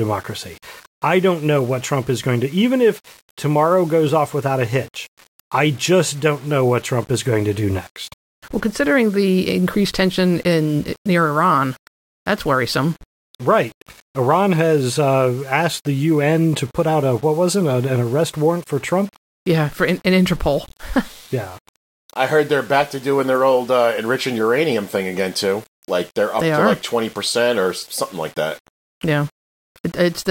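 From start to finish the speech carries a grainy, gritty edge that rides along with the voice, the classic sound of low bit depth without dither. It's likely been rounded down to around 7 bits with no dither, so the error tracks the signal instead of sitting as steady hiss. The quieter tails of syllables get the roughest, sputtering toward silence, with the distortion sitting only about 30 dB under the speech.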